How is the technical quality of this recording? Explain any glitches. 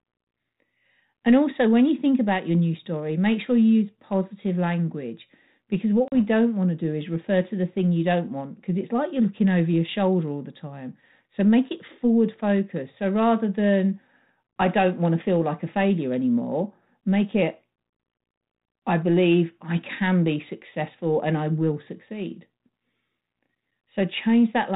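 The speech runs through 32 kbit/s G.726 ADPCM, with light coding damage and nothing above 4 kHz. One glitch stands out: packet loss on an ADPCM call, from 6.08 to 6.17 s, between "positive language because what" and "don't want to do". A hard-edged gap of about 40 ms opens, and the speech after it comes back slightly distorted before settling. A couple of packets went missing and were filled with silence. While they were gone, the decoder's adaptive predictor and step size drifted away from the sender's, so it needs a short stretch of incoming audio to lock back on.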